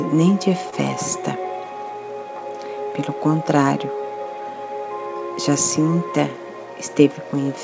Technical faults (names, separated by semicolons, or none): short concealed packet loss